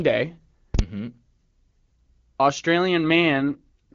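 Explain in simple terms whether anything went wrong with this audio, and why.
At 0.74 s there is a sudden, very loud pop, with the sound cut out for just under 0.05 s until 0.79 s. This is invalid numbers at full scale: a calculation went wrong, and that short stretch was pushed to the loudest possible value instead of real sound.

From 3.10 s to the end, the voice turns rougher and more artificial, with no gap and no loss of clarity in the high or low range. This is an AMR rate drop: a weak phone signal made the HD Voice codec switch to a lower-quality mode.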